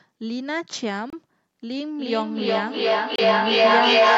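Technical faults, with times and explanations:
1.10 to 1.13 s and 3.16 to 3.19 s, Bluetooth dropout: the sound cuts out cleanly for about 27 ms each time, then picks up as if it had kept playing. That's likely packets arriving too late for the headphones, with roughly two packets' worth lost each time.
1.95 s to the end, feedback echo between two devices: the speech comes back round every 0.4 s or so, thinner and more ringing. The loop is hot enough that the repeats stack up instead of fading, peaking about 9 dB above the speech itself.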